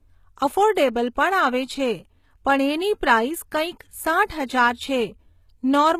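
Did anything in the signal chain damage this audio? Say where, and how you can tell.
Yes, at the codec stage, throughout the speech. The treble sounds bright but gritty and lispy on s sounds, and nothing reaches above 14.9 kHz. This is likely HE-AAC compression, with the treble rebuilt by copying lower bands upward at a low bitrate, perhaps around 20 kbps. A plain low-pass filter would dull the top instead.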